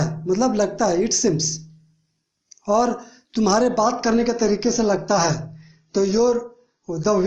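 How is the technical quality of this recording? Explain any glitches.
The quality drops partway through. An adaptive stream at a lower bitrate takes over from 3.68 s to the end at 7.27 s. The connection apparently slowed and the player switched abruptly, with no gap, to a leaner encoding, consistent with AAC falling from about 96 to 24 kbit/s. Codec artefacts rise.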